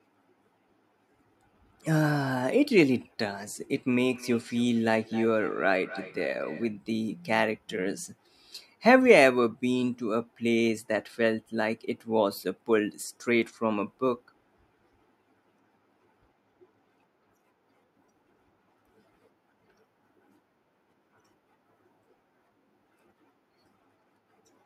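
From about 3.98 to 6.76 s there's a feedback echo between two devices: a second device in the room replays the call, the first microphone catches it, and its canceller can't remove sound it didn't play. Each phrase returns roughly a third of a second later, about 16 dB below the speech.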